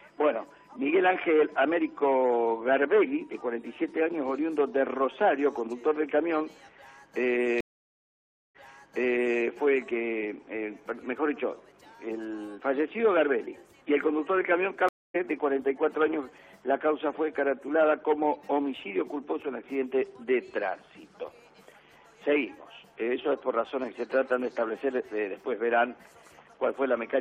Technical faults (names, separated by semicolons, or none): stream reconnect